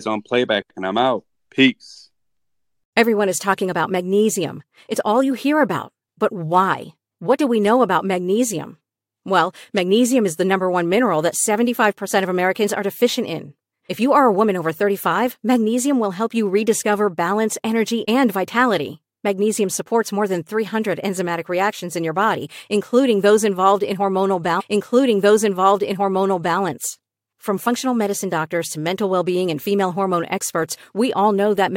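A stream segment was repeated in this speech clip: the player queued the same stretch twice, so after "those involved in hormonal" about 2.0 s replays from 24.59 to 26.59 s, with a small blip at the jump back.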